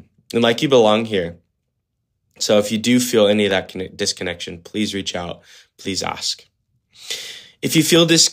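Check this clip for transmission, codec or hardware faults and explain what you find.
Two bursts of CD scratch ticks occur in this speech, at 3.33–4.23 s and 7.06–7.96 s. On each disc turn a blemish overwhelmed error correction, so the player patched or muted samples. This produces six brief ticks per burst, roughly seven a second, the longest roughly 1.5 ms.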